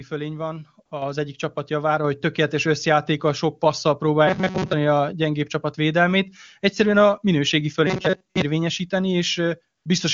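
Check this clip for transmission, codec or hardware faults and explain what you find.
Three kinds of fault are present in this speech clip: comfort noise, a microphone volume step and a robotic buzz.

AMR comfort noise appears at 0.85 to 0.91 s, just before "egyik csapat javára hogy", and again at 9.77 to 9.85 s. Speech frames stopped for 60 ms and then 80 ms. Synthetic, smooth noise replaces the real background.

The microphone volume is stepped up at 1.02 s, about 5 dB in one jump. Voice and background rise together as the input gain is raised.

Robotic sound from repeated short buffers runs from 4.27 to 4.73 s, and from 7.87 to 8.42 s after "a minőségi". A rigid metallic buzz at 188 Hz covers most of the sound. This likely comes from a roughly 5 ms buffer being repeated while real audio is skipped.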